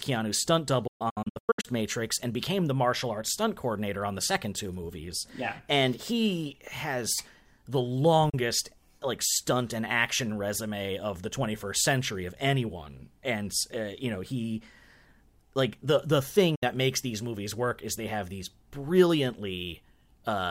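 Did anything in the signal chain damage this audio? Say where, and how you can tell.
Yes. A digital broadcast dropout at the receiver muted frames that failed to decode. Short faded holes are scattered from 0.87 to 1.66 s, then at 8.30 s after "he has the" and at 16.55 s before "makes these movies work."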